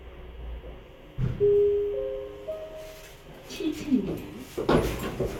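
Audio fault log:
No technical faults can be heard anywhere in the audio, and the signal holds continuity throughout.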